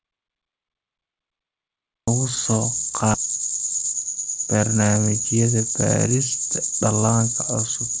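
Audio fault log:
0.00–2.08 s, audio dropout to silence: the clip opens already inside a stretch of silence, with no room tone. It likely comes from lost input while writing continued. Unlike a quiet pause, the speech returns abruptly at 2.08 s.
3.14–3.16 s, skip ahead: the speech jumps forward with no audible gap or fill. About 0.7 s of material is simply missing, and the two sides are butted together. Unlike a dropout, nothing goes silent. The G.722 band limit at 8 kHz stays constant across the join.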